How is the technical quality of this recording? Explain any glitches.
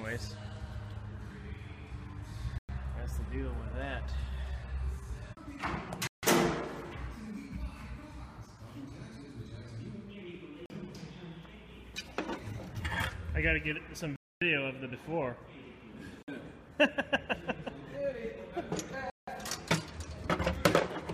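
The recording is marred by six dropouts. Bluetooth stalls occur at 2.58 s (105 ms), 6.07 s (157 ms), 10.66 s (42 ms), 14.16 s (254 ms), 16.23 s (54 ms) and 19.10 s (175 ms). Each time, the audio drops to silence and then resumes. This is likely from interference delaying packets until the receiver's buffer emptied.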